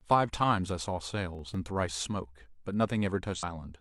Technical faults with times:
1.35-1.54 processor overload crackle
3.34-3.44 damaged data in a compressed stream

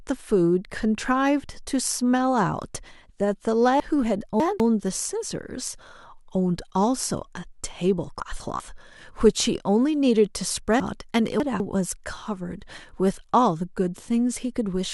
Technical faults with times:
3.80-4.60 chunks out of order
8.20-8.60 chunks out of order
10.80-11.60 chunks out of order

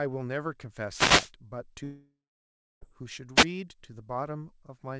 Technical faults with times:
0.90-1.31 wireless microphone noise hit
1.84-2.83 long network dropout
3.36-3.45 wireless microphone noise hit

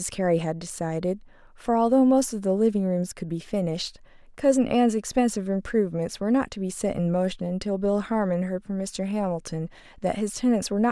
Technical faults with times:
none

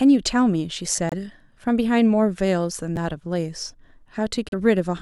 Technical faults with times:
0.96-0.98 repeated buffer
1.09-1.14 Bluetooth stall
2.96 repeated buffer
4.49-4.54 Bluetooth stall

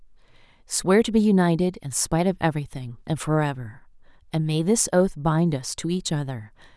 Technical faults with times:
none

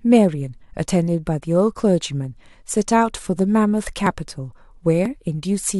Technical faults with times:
4.07 overlap between stream segments
5.06 overlap between stream segments

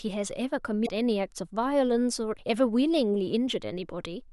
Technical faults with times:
0.82-0.89 damaged data in a compressed stream

